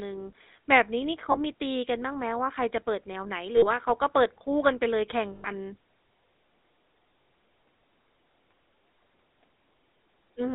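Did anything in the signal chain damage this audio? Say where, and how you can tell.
Yes. At the codec stage, GSM full-rate coding leaves the whole clip buzzy and gravelly within a 250 Hz to 3.7 kHz band. Pulse-driven vocal-tract modelling discards fine excitation detail.

At the network stage, lost GSM frames at 1.32–1.37, 3.56–3.66, 5.32–5.50 and 7.22–7.28 s ring roughly and metallically, as the last good frame repeats.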